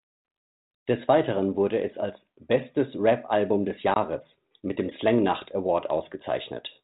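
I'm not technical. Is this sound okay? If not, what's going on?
No. At about 3.94 to 3.97 s the speech drops out in a brief, hard-edged gap, then comes back with a moment of roughness. This is packet loss on an ADPCM call: roughly one 20 ms chunk of the phone-style coded audio went missing and was filled with silence. The decoder then briefly lost track of the sound and needed a few hundredths of a second to catch up.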